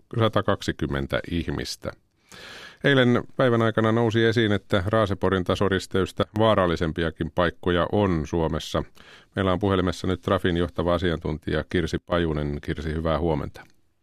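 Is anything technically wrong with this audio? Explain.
Yes. From 6.23 to 6.36 s, just before "vaarallisempiakin paikkoja on", and again from 11.98 to 12.12 s, the speech and background drop abruptly together, by about 20 dB and about 15 dB. This is likely a sudden gain jump, where digital gain changes instantly rather than ramping.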